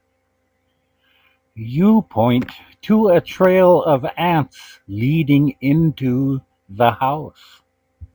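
From start to finish the speech carries a crude rate conversion artefact: a fine, gritty fizz riding on the voice, most noticeable on louder syllables and sibilants. The pattern fits a 32 kHz to 48 kHz conversion done by repeating the nearest sample, with no interpolation filter. The resulting 3:2 jitter in sample timing produces shifted, inharmonic copies of the voice, sitting roughly 30 dB below the speech.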